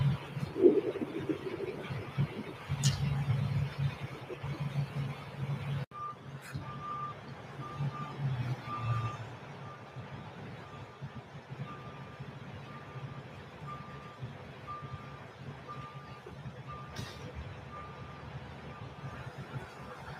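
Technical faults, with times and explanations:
Throughout, noise suppressor applied to music or sounds: sustained sound and tails pump down by around 10 dB, because a speech-tuned suppressor treats steady sound as noise.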